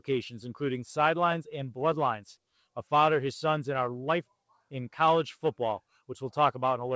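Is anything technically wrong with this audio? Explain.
No, nothing is technically wrong: the audio comes through a call path whose codec holds the band to nothing above 8 kHz, which fits wideband G.722 at about 64 kbps.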